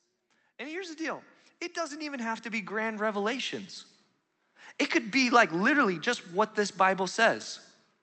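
Speech heard through an Opus call path, with the top end limited to about 8 kHz. From 0.58 to 3.63 s, automatic gain rising lifts voice and background together by about 13 dB as the gain control chases a quiet input.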